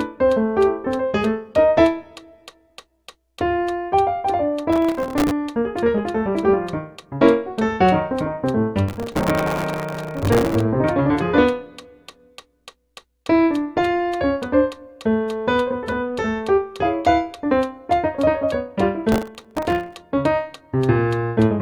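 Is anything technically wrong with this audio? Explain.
Yes. Processor overload crackle appears three times: 4.73 to 5.31 s, 8.89 to 10.61 s, and 19.12 to 19.95 s. The processor repeatedly misses its deadlines for very short buffers, which fits a buffer of about 1.5 ms. Each miss replays a fragment of old audio with abrupt edges. Dozens of these in quick succession produce a gritty, tearing crackle over the sound that stops once the load eases. The middle burst is the longest and densest.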